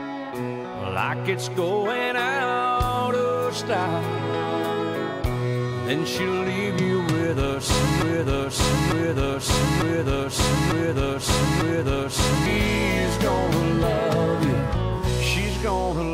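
A broken-record loop runs from 8.02 s to 12.46 s in this audio clip: a fragment of about 0.9 s plays five times back to back, each repeat identical, so the sound sticks in place instead of moving forward. The likely cause is a stall in the player, encoder or stream, which went on resending the last fragment it held. Whatever audio belonged in those four and a half seconds is missing.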